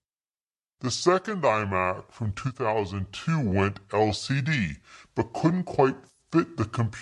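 This speech clip is played back at the wrong sample rate for its whole length. The samples are clocked out more slowly than they were captured, with no resampling, and the ratio heard fits 44.1 kHz material played at 32 kHz. Speed and pitch therefore drop together: everything runs at 0.726 times normal speed and sits about 5.55 semitones low, so the voice sounds deep, slowed and drawn out from start to finish.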